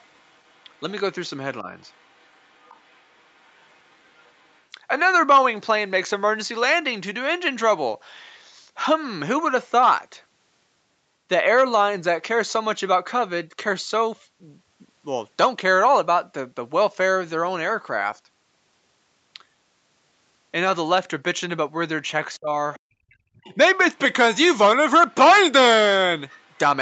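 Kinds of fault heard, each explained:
Other side's voice leaking through: a faint second voice sits well below the talker at the start, around 22 to 23 s and near the end, likely leftover loudspeaker echo. It adds sound rather than removing it.
Speech suppressed in double talk: the talker's own voice dips briefly near 1.6 s, then drops deeply for most of 22.4 to 23.6 s, likely because the echo canceller ducked both voices. Here sound is taken away, not added.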